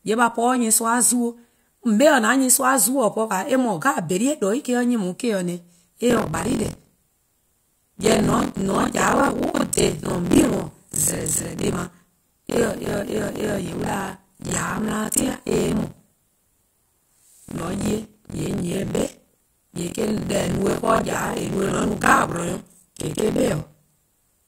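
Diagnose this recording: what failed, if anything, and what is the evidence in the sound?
Buffer tearing at the driver/buffer stage, from 6.08 s to the end: a robotic 43.1 Hz buzz rides the speech, fitting a 1024-sample buffer. Writer and reader have slipped, so roughly half of each period replays audio about 50 ms old. Waveform shows hard joins every period; the spectrogram shows evenly spaced vertical striations only during speech.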